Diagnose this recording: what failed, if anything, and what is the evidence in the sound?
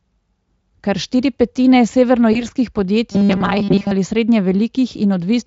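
At the network stage, VoIP packet loss concealed by the speech codec occurs just after "štiri petine", from 2.33 to 2.47 s. A gap that fits a single lost 20 ms frame was bridged by the Speex decoder extrapolating its last pitch and filter, so the sound smears briefly and stays weakened for about 120 ms.

At the driver or buffer stage, robotic sound from repeated short buffers runs from 3.12 to 3.92 s, ending just before "ali srednje". The likely cause is late-arriving audio, with the last 5 ms looped to fill the gaps across most of that stretch. This imposes a rigid 200 Hz metallic buzz over the rough shape of the sound.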